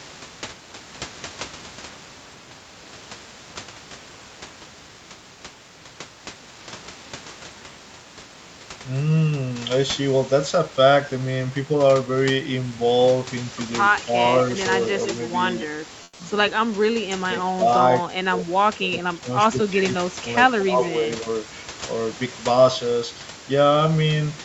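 From 13.71 to 14.02 s a faint delayed copy of the speech, about 25 dB down and trailing by roughly 133 ms, sits under the talker. This is echo leak, likely from a far-end echo canceller passing residual loudspeaker pickup back. It returns briefly at 14.42–14.46 s and again from 14.82 to 15.66 s, now louder at about 15 dB below the speech.

Overlapping the first echo, from 13.98 to 14.17 s the speech dips by roughly 10 dB. This is likely speech suppressed in double talk: with both ends active, the canceller attenuates the near talker along with the echo.

From 16.03 to 16.19 s the room background is swapped for 160 ms of smooth, featureless comfort noise, about 6 dB quieter, likely as Opus DTX fills a pause with synthetic noise instead of the real ambience.

Double-talk suppression recurs at 17.1–17.68 s, with the speech pulled down by about 15 dB. From 18.03 to 21.27 s it is heavier, with dips of up to about 25 dB adding up to around two seconds of affected speech.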